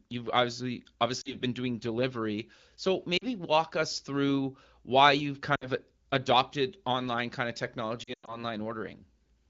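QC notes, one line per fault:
1.21–1.35 s, lost AMR speech frames: a brief warble and dip between "you've obviously" and "been doing delivery". About 40 ms is missing, which fits two dropped 20 ms frames. The decoder reuses the last good pitch and vocal-tract settings at reduced gain.
3.17–3.24 s, lost AMR speech frames: the same short smear, with about 40 ms concealed just before "walk us through why".
5.55–5.68 s, lost AMR speech frames: a slightly longer dip of about 60 ms, likely three frames, between "us through why you've" and "adopted online kind of". Speech returns thin for a moment.
8.03–8.44 s, lost AMR speech frames: a cluster of losses totalling about 160 ms, scattered over about 240 ms. The longest gap is 100 ms, where the sound drops to near silence within two frames, as wideband concealment does. The AMR-WB coding at 12.65 kbit/s itself does only light damage.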